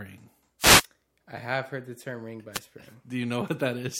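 Two short bursts of static swish through the speech, from 0.59 to 0.85 s just before "I have heard the" and from 2.52 to 2.60 s just after "heard the term ring". They are wireless microphone noise hits: the FM radio link fades and receiver noise rises over the voice.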